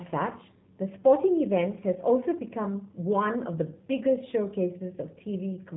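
Speech carrying G.729 codec damage throughout: nothing above 3.8 kHz survives, and the plainly rough, synthetic texture from sparse-pulse resynthesis fits an 8 kbit/s stream.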